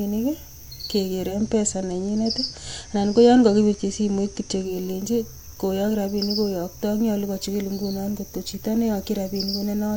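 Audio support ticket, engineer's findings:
Digital radio blending to analogue, 1.26 to 4.76 s. Speech drops to FM: 127 ms crossfade each way, level shift about 2 dB, hiss around 40 dB down. Probable component: hybrid receiver losing digital lock.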